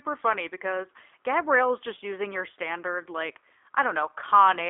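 Throughout, the speech passes through a G.729 codec, likely at 8 kbit/s: pulse-coded reconstruction leaves it rough and synthetic, band-limited to 300 Hz–3.6 kHz, with nothing above 3.7 kHz.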